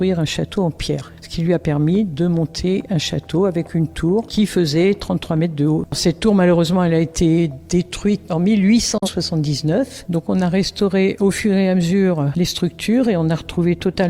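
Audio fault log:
8.98–9.08 s, digital broadcast dropout: the audio fades out over 3 ms into a brief mute, consistent with the receiver discarding one corrupted frame; roughly 43 ms of programme is lost.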